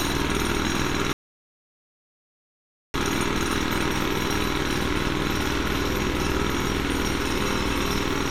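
At 1.13 s a rebuffering stall occurs: the player exhausts its downloaded audio and halts until more data arrives. The sound drops to silence until 2.94 s, then resumes exactly where it stopped, losing nothing but adding about 1.81 s.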